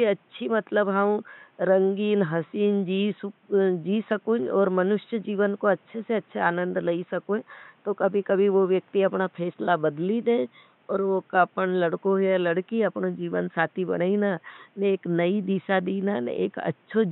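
Speech recording with no technical faults; the only background is room noise sitting about 38 dB below the speech.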